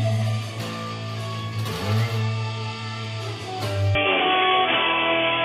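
At 3.95 s everything turns dull, nothing above 3.5 kHz, with a level jump and new faint noise floor, likely an input switched to a poorer device.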